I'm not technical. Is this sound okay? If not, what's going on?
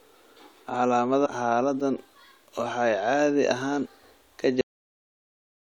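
No. There are two problems in this speech clip.

First, you'll hear two brief glitches, each a chirp, squawk, click or short gap: one at about 1.25 to 1.27 seconds, and another at about 3.85 to 3.87 seconds, right after "waxay caadi ahaan". Each may also sound like a tiny skip forward. This is damaged data in a compressed stream. A small piece of the saved or transmitted file got garbled. The player couldn't read that spot, so it produced a glitch and then jumped ahead to the next readable part.

Second, the speech stops abruptly at 4.61 seconds, possibly with a small click, and is followed by dead silence until the end. This is a cut-off end. The final stretch of audio was never written out or played, so the sound is chopped off mid-way instead of fading naturally. The silence after that point is a hard stop, not a quiet pause.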